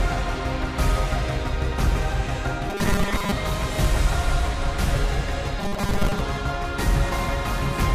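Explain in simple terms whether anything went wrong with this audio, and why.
Twice the sound turns into a stiff, metallic buzz: from 2.7 to 3.31 seconds, and again from 5.59 to 6.21 seconds. It still roughly follows the shape of the original, but a fixed, droning buzz at 200 Hz runs through it. This is robotic sound from repeated short buffers, likely because fresh audio arrived too slowly and the player kept replaying the last 5 ms slice to fill the gap, skipping most of the real sound in those stretches.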